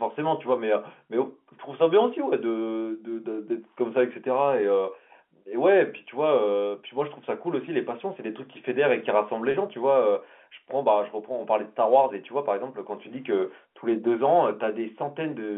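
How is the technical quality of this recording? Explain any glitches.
The recording has one brief glitch, heard over telephone-band audio that stops near 3.4 kHz, as G.711 coding does. At 9.51 s, packet loss with pitch repetition cuts out about 30 ms of sound, consistent with a single lost packet. The receiver fills the gap by looping the last pitch period, so the sound briefly holds with a buzzy quality. A spectrogram shows frozen harmonic striations across the gap. The waveform shows identical repeating cycles tapering in level.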